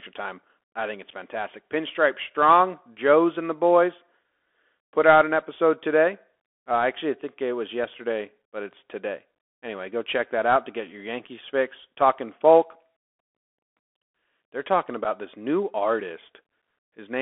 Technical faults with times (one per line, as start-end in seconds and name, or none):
0.00-17.21 Bluetooth CVSD headset codec
15.04-15.07 unconcealed Bluetooth headset packet loss